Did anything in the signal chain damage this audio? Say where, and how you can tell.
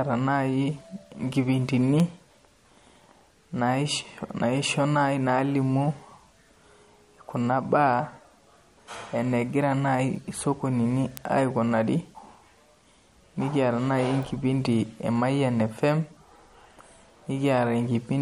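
Yes. At the codec stage, the speech sounds watery and swirly throughout, with smeared consonant attacks and nothing above 13.8 kHz. This is likely MP3 compression at a low bitrate, around 48 kbps. A spectrogram would show a hard treble ceiling and speckled, flickering holes where weak bands switch on and off.

At the converter stage there are word clock ticks: sharp clicks of uneven strength, about one per second from 0.98 s to 17.29 s, roughly fifteen in all. The receiving converter's free-running clock is around 20 ppm off the sender's, so it periodically drops or repeats one sample. These ticks would appear as evenly spaced thin vertical lines on a spectrogram and single-sample jumps on the waveform.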